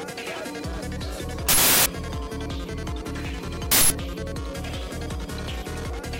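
Two loud, harsh bursts of digital noise interrupt the audio, at 1.49–1.86 s and again at 3.72–3.90 s. That's an uninitialised buffer: the output played blocks before anything was written to them, so stale memory came out as sound. Their lengths fit 16384- and 8192-sample blocks.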